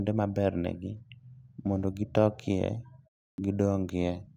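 Speech, with one clipped start after a pause at about 3.3 s: following a 0.3 s gap, roughly 80 ms of the next word goes missing, so it snaps in abruptly, its opening sound chopped off while the output device wakes back up.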